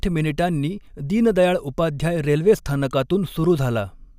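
No faults can be heard anywhere in the recording.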